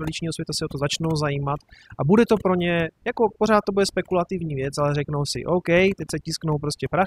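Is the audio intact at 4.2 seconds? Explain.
No. Overdone noise removal affects the whole clip, including 4.2 seconds. Aggressive noise reduction cuts bands near the noise floor, leaving twinkling near-silence and stripping quiet parts of the speech.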